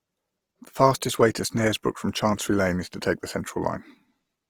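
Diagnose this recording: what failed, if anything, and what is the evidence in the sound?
The codec stage is the likely culprit: across the whole clip the speech has a rough, grainy texture in the upper range, consistent with Opus compression in its music mode at a low rate that fits about 24 kbps. Because band energies are preserved and starved bands are filled with folded or noise content, a spectrogram shows full bandwidth without holes, but the harmonics above a few kHz turn into diffuse, speckled noise.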